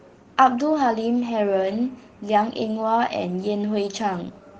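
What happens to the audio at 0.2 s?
At 0.2 s the speech continues cleanly, with no dropout, click, distortion or other fault at that point.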